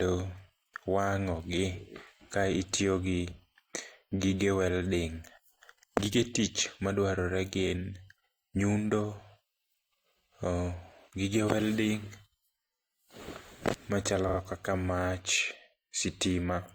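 At 14.28 to 14.38 s the speech stutters because of repeated frames: a short run of compressed audio was decoded two more times, replaying about 93 ms and lengthening the clip by that amount. The span fits two 46.4 ms codec frames.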